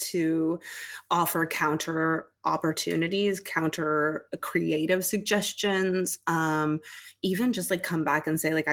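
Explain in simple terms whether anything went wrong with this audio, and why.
Nothing went wrong with this audio, as nothing in the speech sounds broken or out of place.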